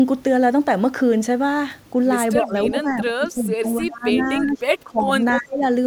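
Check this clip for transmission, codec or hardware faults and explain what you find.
Two faults are present in this speech: the talker's voice is repeatedly pushed down, and short delayed echoes of the voice slip through.

Speech suppressed in double talk, from 2.41 to 5.10 s and again from 5.39 to 5.65 s: the voice sinks in pieces, by about 20 dB and then about 25 dB, over roughly two seconds in the first span. This is likely an echo canceller muting its own talker while both sides spoke at once.

Echo leak, at 3.00 to 3.04 s, 4.17 to 4.23 s and 5.30 to 5.39 s: brief scraps of the voice return 295 ms late, about 15 dB below the speech at first and about 10 dB below later. A loudspeaker-side canceller likely left this residue uncancelled.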